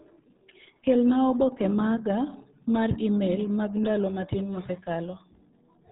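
Speech, carried throughout by the RealAudio 14.4 codec, and the damage is heavy. Nothing above about 3.8 kHz survives, so consonants lose their edge and the whole clip sounds muffled and boxed-in. The low-rate coder models the signal too coarsely to hold it together, leaving a gargly, watery texture over every syllable. The combination of band limit and smearing fits RealAudio 1 running at 8 kbit/s, a dial-up-era setting.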